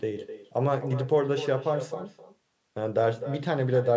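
Throughout the speech, an echo with no canceller trails every phrase. The far end's loudspeaker feeds its microphone, and nothing removes the returning signal. About a third of a second later comes a thinner copy, about 12 dB quieter, over band-limited call audio topping out at 8 kHz.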